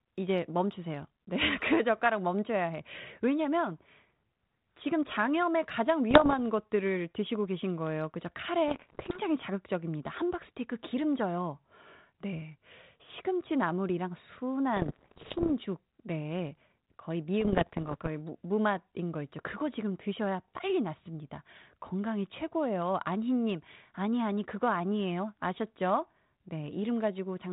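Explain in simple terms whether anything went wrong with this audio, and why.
Bit errors on an ADPCM link hit the speech from 6.11 to 6.35, 8.68 to 9.19, 14.76 to 15.52 and 17.40 to 18.09 seconds. Flipped bits knock the decoder off track for a moment, causing pops, rough crackly bursts and brief jumps in loudness.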